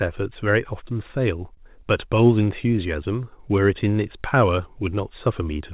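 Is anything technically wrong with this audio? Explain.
Yes. There is one short stall from a late packet, from 1.55 to 1.60 s. The jitter buffer ran dry, so the receiver stretched the preceding speech for about 21 ms until the packet arrived. Nothing is lost, but playback runs 21 ms later afterward, and that sound is briefly held with a slight buzz or dip. The audio is band-limited to 4 kHz, which fits a narrowband call codec such as G.711.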